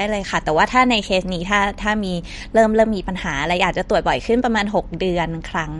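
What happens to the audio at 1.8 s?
At 1.8 s, as throughout, MP3 compression is audible: nothing above 11.2 kHz and a watery swirl, likely from an encoder short of bits, consistent with 48 kbps.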